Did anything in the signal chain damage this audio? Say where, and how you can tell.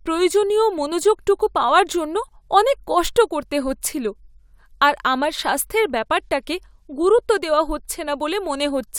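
No, nothing in this recording stood out as damaged on listening.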